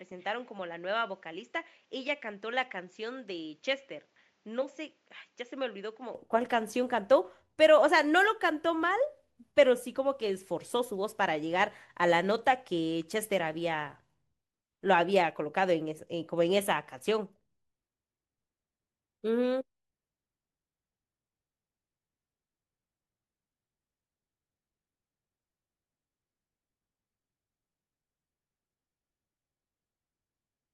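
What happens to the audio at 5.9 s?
The input was likely switched to a poorer device, which covers the opening 0.0 to 6.15 s, so 5.9 s falls inside it. That device passes nothing above 7.6 kHz, sitting about 10 dB quieter, duller and boxier, with a faint new noise floor roughly 40 dB down.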